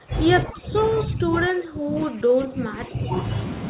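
Speech suppressed in double talk hits this speech clip from 0 to 0.14 s and again from 0.44 to 3.29 s, with the level pulled down by roughly 25 dB in the first stretch and about 20 dB in the second. The likely cause is an echo canceller that, with both ends talking at once, couldn't tell the near talker from loudspeaker echo and attenuated everything. The sound is band-limited to 4 kHz throughout, which fits a G.711 narrowband call codec.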